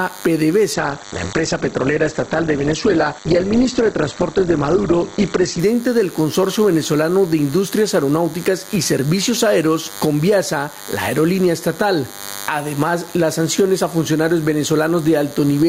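From the start and throughout, a DECT cordless phone or base station close by pulses radio bursts 100 times a second, and the audio circuit rectifies them. The result is a DECT cordless phone buzz, a steady thin buzz at 100 Hz with many harmonics, about 25 dB below the sound itself.

Also throughout, the level rises and falls by around 10 dB, which leaves the dynamics squashed. This gain pumping is likely caused by input gain set far too high, with a fast limiter or compressor pulling it back down on every loud moment.

From 0.77 s to 5.71 s, the call's bandwidth estimate fell and the encoder was told to drop from 128 kbps to 10 kbps. It held the lowest rate for about 4.9 s, and the bandwidth narrowed from 20 kHz to 8 kHz. During this call bitrate drop the audio turns coarse and loses its top end, then clears once the bitrate recovers at 5.71 s.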